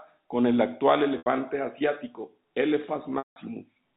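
At 1.18 s, right after "con el actual", an 80 ms gap is concealed by packet loss with pitch repetition: the receiver loops the last pitch period and fades it out, so the sound briefly holds on a buzzy tone, consistent with about four 20 ms packets lost. At 3.18 s a longer 180 ms loss fades fully to silence before the speech cross-fades back in at 3.36 s. The G.711 telephone band around it stays below 4 kHz.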